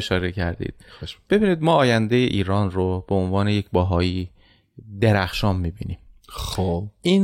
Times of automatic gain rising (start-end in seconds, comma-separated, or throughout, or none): none